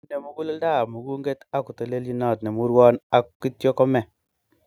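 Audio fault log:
0.36–3.11 s, automatic gain rising: the speech and the background swell upward together, climbing steadily by about 11 dB over nearly three seconds. The automatic gain control judged the input too quiet and kept raising its gain, lifting everything it passed at once.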